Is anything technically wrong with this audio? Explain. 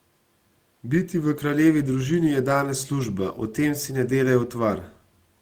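Yes. From 2.99 to 3.05 s the speech has a lost packet rebuilt from error correction. Two packets went missing, and the decoder played the low-bitrate copies carried in the following packets. That leaves no gap, but about 40 ms of audio sounds rougher and noisier. On a spectrogram this shows as a brief smeared patch. The waveform stays continuous.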